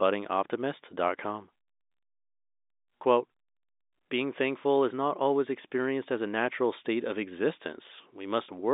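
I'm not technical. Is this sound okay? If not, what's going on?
Yes, it's fine: this is speech heard over an ordinary telephone line, so it has that familiar narrow phone sound with nothing higher than about 3.8 kHz getting through, and nothing has gone wrong with it.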